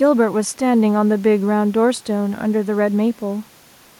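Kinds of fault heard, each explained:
No technical faults are present in the signal path, and the recording room's own background sits about 34 dB below the speech.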